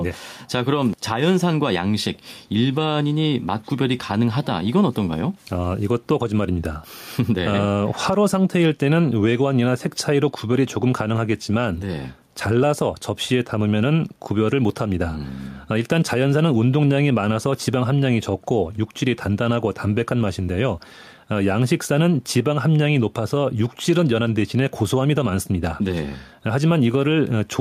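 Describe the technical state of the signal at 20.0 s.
Gain pumping runs through the whole clip, 20.0 s included: the gain is pulled down by roughly 5 dB under each loud syllable, with the background room noise sitting about 44 dB below the speech. The likely cause is excessive mic gain driving a fast limiter. On a waveform, the peaks look flattened and even.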